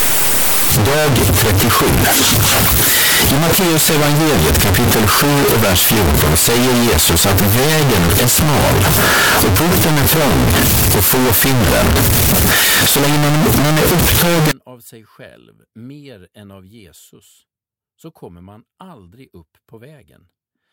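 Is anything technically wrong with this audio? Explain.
Yes. From 0.0 to 14.51 s the speech is buried in very loud, harsh distortion, with quiet stretches as loud as the rest. The likely cause is signed and unsigned mixed up, which fits 16-bit samples with the top bit flipped: every zero crossing becomes a full-range jump.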